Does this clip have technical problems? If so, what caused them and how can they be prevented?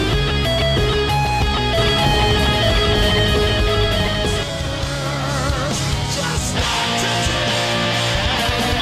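Yes. From 1.77 s to 4.43 s there is a doubled audio track: a full-band copy of the sound runs about a second behind, at roughly the original level, with no decay or room colour, and it starts and stops abruptly. The likely cause is the same audio captured a second time through a slower path, or an edit that left two out-of-step copies overlapping. Prevent it by routing each source through a single capture path and checking edits for overlapping duplicate regions before export.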